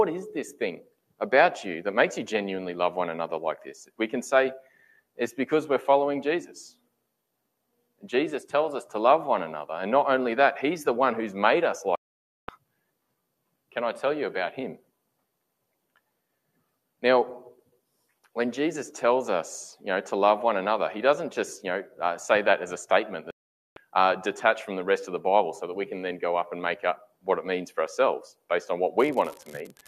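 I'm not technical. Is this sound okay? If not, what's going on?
No. Twice the receiver lost the digital broadcast signal, a digital broadcast dropout. When incoming chunks of data fail their error check, the receiver mutes rather than play garbage. You hear the sound vanish from 11.95 to 12.49 s, about half a second, and again from 23.31 to 23.77 s, a little under half a second. Whatever was broadcast during those gaps is gone for good.

Near the end there is an unreliable data bit: one of the wires or lines carrying the digital audio is faulty, so one bit of each sample sometimes flips at random. Each flip makes a click of the same size. From 28.97 s to the end at 29.88 s, these pile up into a steady crackle or fizz that stays even when the sound is quiet.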